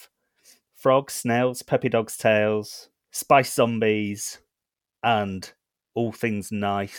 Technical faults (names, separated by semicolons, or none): none